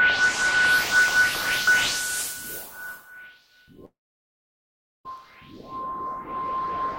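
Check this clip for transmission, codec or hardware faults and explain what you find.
A long network dropout breaks the transmission from 3.85 s to 5.06 s. The link likely stopped delivering audio for about 1.2 s, and the receiver's concealment stretched the last sound it had into a brief fading buzz or hiss. After less than a tenth of a second that tail dies away, leaving about 1.1 s of silence. The audio resumes at 5.06 s, but everything that should have played during the gap never returns.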